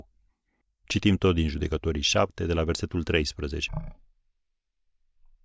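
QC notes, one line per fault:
3.68–5.44 s, wrong sample rate: speech drops 17.6 semitones and slows to 0.363× speed together, which fits 44.1 kHz audio played at 16 kHz without conversion.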